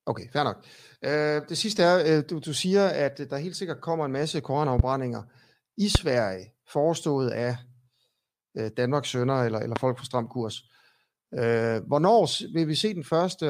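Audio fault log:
4.79–4.82 s, 5.95–5.98 s and 9.76–9.79 s: loud pop. Three single sharp pops sit on top of the speech, peaking roughly 15 to 20 dB above it. The speech carries on underneath. A brief voltage pulse was likely added, from a switch or static.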